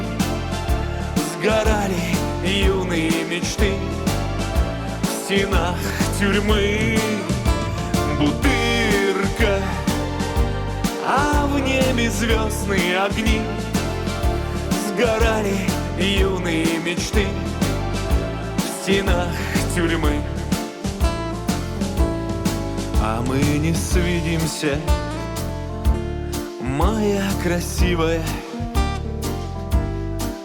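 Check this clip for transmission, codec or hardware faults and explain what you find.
Nothing here stands out as a transmission, codec or hardware problem; it all comes across as intended, with no dropouts or glitches to point to.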